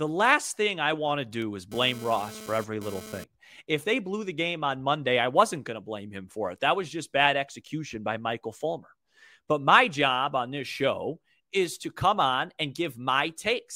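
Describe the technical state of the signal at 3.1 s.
At 3.1 s the signal carries GSM phone buzz, running from 1.42 s, just after "thing I want to", to 3.24 s. A nearby 2G phone exchanging data transmits radio bursts about 217 times a second, which the audio circuit rectifies into a raspy buzz at about 16 dB below the speech, coming and going with the transfer. A spectrogram shows stacked horizontal lines at 217 Hz and its harmonics, switching on and off; the waveform shows a regular pulse train riding over the speech.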